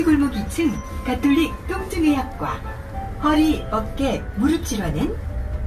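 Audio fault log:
Throughout, generation loss: the sound is swirly, smeared and hollow, with blurred attacks and nothing above 14 kHz. This likely comes from the audio being decoded and re-encoded several times, perhaps about four, with a lossy codec, which fits an AAC-LC chain at around 64 kbit/s. Each pass quantises again on a shifted frame grid, so noise and spectral gaps accumulate beyond what a single encode at that rate would leave.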